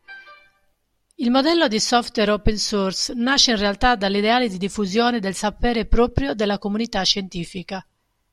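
Nothing in this speech recording stands out as a technical fault; the signal holds steady and continuous throughout.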